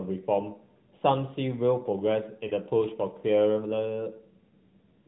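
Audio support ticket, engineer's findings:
Lost AMR speech frames, 2.48 to 2.52 s: brief dip or warble, not a hard gap or click. Decoder concealment replayed last good pitch and vocal tract settings at falling gain, which fits a single 20 ms frame failing its checksum. Narrowband AMR, 4 kHz ceiling.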